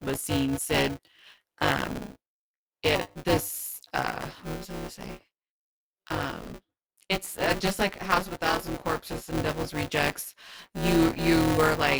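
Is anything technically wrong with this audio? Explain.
Yes, buffer tearing runs through the whole speech clip: a robotic 200 Hz rattle where each buffer mixes in roughly a fifth of audio about 15 ms stale. Unlike mains hum, it vanishes in pauses.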